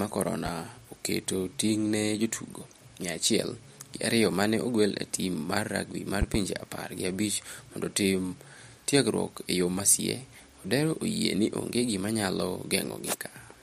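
A sudden voltage step, likely from a plug, switch or static discharge, lands on the signal as a loud pop at 0.46 to 0.50 s, then a double pop from 6.22 to 6.38 s between "tim mar rugby mar" and "apar gi abich mondo". Each pop peaks roughly 10 dB above the speech, which continues underneath.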